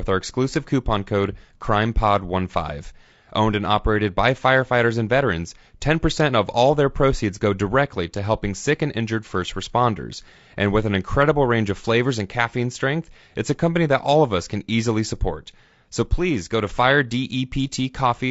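Throughout the speech, harmonics sound rough and grainy, with noise filling the gaps between them and plainly audible damage in the upper band. This is likely low-delay AAC compression (AAC-ELD): its short frames resolve pitch poorly, and the damage fits a bitrate around 32 kbps.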